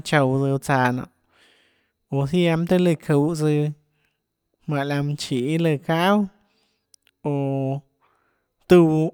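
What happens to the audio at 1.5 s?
Nothing goes wrong at 1.5 s; the speech carries on intact through that moment.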